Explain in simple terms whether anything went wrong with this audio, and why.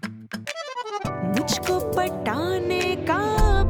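Nothing went wrong with this audio, because there are no glitches, gaps or other problems to hear anywhere in it.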